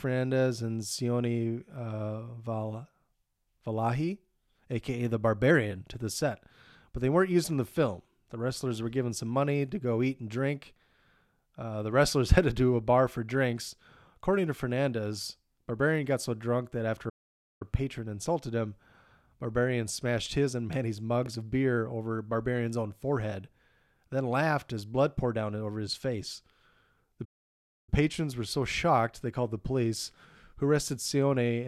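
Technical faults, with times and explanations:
17.09–17.62 s and 27.24–27.89 s, playback stall: the speech cuts to dead silence mid-flow, first for about half a second, then for roughly 0.63 s, before picking up again. In both gaps the flow of the talk just hangs and restarts. That points to the player likely running dry of buffered data, or its audio thread getting blocked, leaving nothing to output until it caught up.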